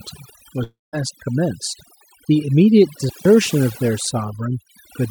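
Overdone noise removal runs through the whole speech clip: bands near the noise floor are cut hard, leaving near-silent gaps with twinkling specks. From 0.63 to 0.95 s the sound breaks into a fading buzz or hiss, then about 190 ms of silence, with about 300 ms lost; a long network dropout is the likely cause. From 3.06 to 3.25 s an intermittent contact opens for about 160 ms, cutting the signal with crackle at both edges and faint hiss between.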